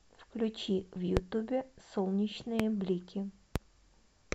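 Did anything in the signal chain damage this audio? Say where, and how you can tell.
Yes. Three loud pops sit on top of the speech, at 1.17 to 1.20 s, 2.60 to 2.63 s and 3.56 to 3.59 s. Each is a single sharp hit lasting about 30 ms and peaking roughly 20 dB above the speech, which carries on unbroken underneath. The likely stage is the analogue wiring, where an intermittent plug or switch contact injects a voltage step. The following circuits then shape that step into a brief thump.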